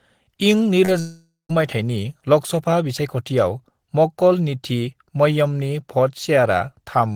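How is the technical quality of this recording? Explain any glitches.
The recording has two connection glitches close together near the start, both in the first second and a half of the speech.

At 0.85 to 0.90 s there's short concealed packet loss. About 20 ms of audio arrived too late, so the decoder stretched the previous sound over the gap and blended back in. You hear it as a quick smear or wobble.

From 1.0 to 1.51 s there's what is likely a long network dropout. Half a second of audio is gone. The receiver extended the last sound as a fading buzz or hiss, and the final 160 ms or so are near-silent. The speech then resumes at "माइथायनि लोकसभा बिसायखथियाव", with the missing part skipped.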